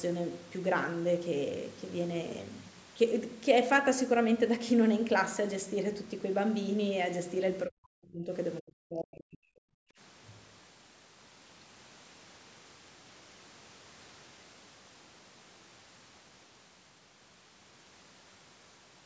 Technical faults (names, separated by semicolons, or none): speech suppressed in double talk; background gated by the echo canceller